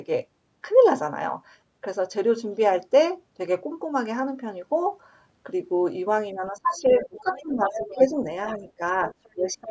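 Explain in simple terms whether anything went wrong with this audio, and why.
From 6.33 to 8.16 s, and again at 8.58 to 8.80 s and from 9.35 s to the end, the speech dips in patches. This is speech suppressed in double talk: both sides likely talked at once, and the echo canceller turned everything down.

Quiet scraps of a second voice appear at 6.97 to 7.44 s, 7.67 to 8.02 s, 8.46 to 8.71 s, 9.11 to 9.29 s and 9.61 to 9.68 s, loudest around 7.7 s. This is the other side's voice leaking through, likely from the loudspeaker echo that wasn't fully removed.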